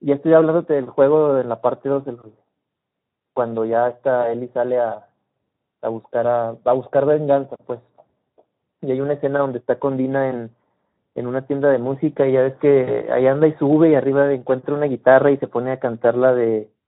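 A speech clip with a couple of problems layered on top of each other. First, there's channel delay causing comb filtering: one side is running late by only a fraction of a millisecond, and once the two are folded to mono, the shared content cancels at regularly spaced frequencies. The first notch sits somewhere around 3 kHz, which is right where a lot of speech clarity lives, so the whole thing comes across hollow and a bit phasey the entire way through. Second, the Speex codec is doing plainly audible damage throughout, at a bitrate around 11 kbps. With too few bits for the excitation, the voice turns hoarse and grainy, and anything up top is more shaped noise than real detail. On top of that there's VoIP packet loss concealed by the speech codec, in two spots. From 4.22 to 4.30 s about 20 ms went missing, and from 12.83 to 13.00 s about 40 ms did. In both places the decoder bridges the gap by carrying forward its last pitch and filter state while turning the gain down, so you hear a brief stretch of buzzy tone or coloured noise that fades. 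Because every frame builds on the previous one, the voice stays weak and a little off for a moment after real packets come back, which is why each glitch lasts longer than the audio that was actually lost.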